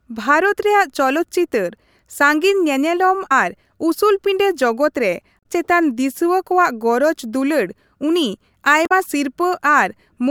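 Damaged data in a compressed stream breaks into the speech three times: at 3.28 to 3.32 s, 5.39 to 5.46 s and 8.83 to 8.92 s. In each spot, bytes in the encoded stream are corrupt, so the decoder misreads those frames and loses sync until it locks onto the next valid frame header. Each event lasts between about 40 and 90 ms and comes out as a short glitch cutting across the speech.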